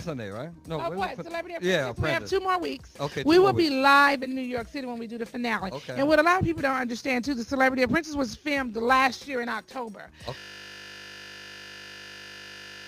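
At 10.38 s the audio turns into a steady 50 Hz buzz that lasts to the end. This is a system hang loop: the hardware keeps replaying one 20 ms buffer.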